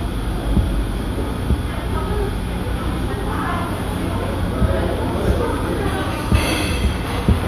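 From 4.97 s to 7.43 s a train of clicks runs over the audio: about twenty near-identical pulses at a steady 8.6 per second, peaking roughly 5 dB above the surrounding sound, heard as a regular ticking that persists through quieter moments. The likely cause is interference or a faulty connection or power supply injecting pulses. On a waveform they show as evenly spaced narrow spikes; a spectrogram shows matching thin vertical lines across the full frequency range.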